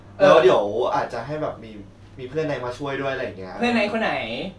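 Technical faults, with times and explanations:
No technical faults detected.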